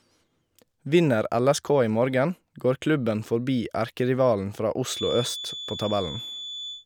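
From 4.84 s, after "klubben forbi erkerivalen fra", a thin 3.5 kHz feedback whistle sits about 10 dB under the speech until the end, likely a loudspeaker-to-microphone loop held steady rather than a howl that keeps building.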